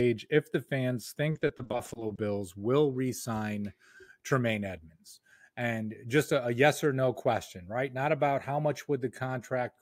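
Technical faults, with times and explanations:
1.31–2.19 s, repeated packet loss (robotic sound): between "if the fans" and "will re sign", rapid short dropouts of up to 40 ms are each patched by extending the previous sound. Roughly a third of the stretch is concealed, giving choppy, robotic speech.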